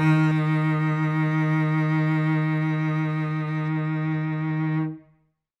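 From 3.68 s to the end, the music turns dull and muffled: de-emphasis applied wrongly. A treble cut meant to reverse pre-emphasis has been applied to material that never had it, or applied twice, so the top end tilts down smoothly, about 8 dB lower at 10 kHz than at 1 kHz. Unlike a low-pass filter or a codec's bandwidth limit, there is no abrupt ceiling. High frequencies stay present but recessed, fading gradually rather than vanishing above a fixed frequency.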